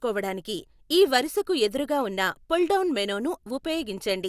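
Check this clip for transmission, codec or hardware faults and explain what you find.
I find no faults to explain in this clip.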